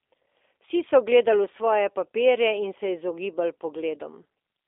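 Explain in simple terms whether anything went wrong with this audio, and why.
The whole clip has been through G.729 codec compression, the kind used for internet phone calls. The speech is squeezed into a narrow phone-line band, roughly 300 Hz to 3.6 kHz, with nothing above that, so it sounds thin and boxed-in. The codec keeps only a rough model of how the voice resonates, its pitch, and a few pulses per short slice of time, rebuilding the rest. That leaves a plainly audible rough, slightly synthetic edge from start to finish.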